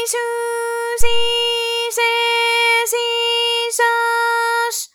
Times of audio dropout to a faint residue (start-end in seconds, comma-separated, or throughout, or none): none